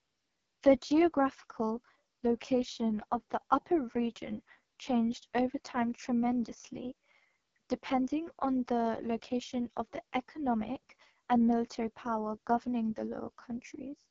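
From start to finish the speech sounds rough and raspy, with a buzzy, grainy texture and nothing above about 7.4 kHz. This is AMR wideband (HD Voice) codec damage, heavy enough to point to its lowest 6.6 kbit/s mode, where the vocal tract model is starved of bits.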